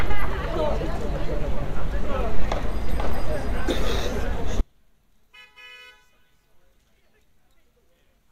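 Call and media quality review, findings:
Sudden collapse in level from 4.61 s to the end of the clip. Drop of about 34 dB. What remains is faint. Centred content nearly gone. Probable component: stereo output or mixdown stage. Likely cause: one channel inverted, one side's polarity reversed. Shared content between left and right cancels on a mono sum. Only the small left-right difference survives. Near-total cancellation suggests the two channels carry almost identical material.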